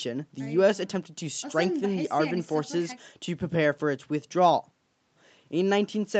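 No technical faults are audible.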